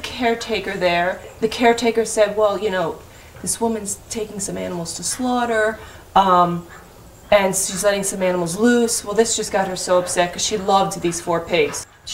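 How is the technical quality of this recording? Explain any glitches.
No glitches or faults detected.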